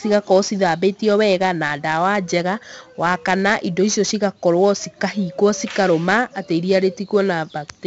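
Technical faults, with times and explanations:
Throughout, 4-bit ADPCM compression: each sample is stored as a coarse 4-bit step from a prediction, so heavy, level-following gritty hiss rides every loud stretch of speech. Nothing above 7.8 kHz remains, which fits a 16 kHz rate near 64 kbps, dulling the sound.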